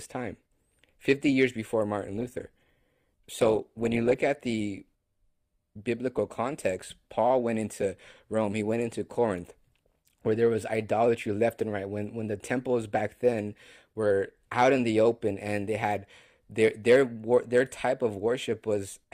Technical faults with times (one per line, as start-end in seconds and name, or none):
2.17-4.17 adaptive stream at a lower bitrate